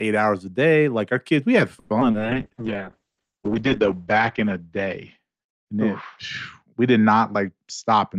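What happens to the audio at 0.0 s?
Nothing goes wrong at 0.0 s: the audio is intact at that moment.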